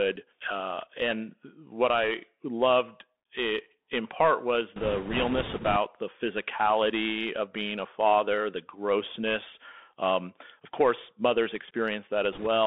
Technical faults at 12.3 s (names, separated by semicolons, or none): Bluetooth CVSD headset codec; bit errors on a Bluetooth voice link